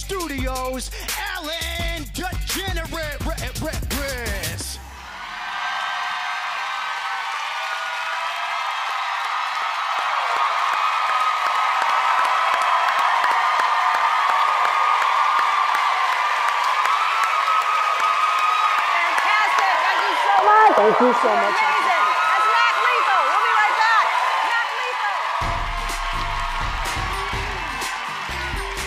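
Computer activity noise runs through the whole clip: changing load on the computer disturbs the audio circuit's shared ground, leaking a buzzing, chirping pulse train at roughly a hundred pulses per second, sitting around 40 dB below the sound and rising and falling with the machine's activity rather than the audio.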